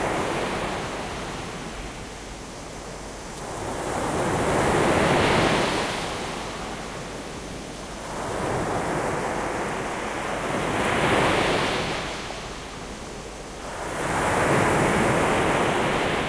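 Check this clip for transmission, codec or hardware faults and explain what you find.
No audible faults in this recording of sounds, so there is nothing to report.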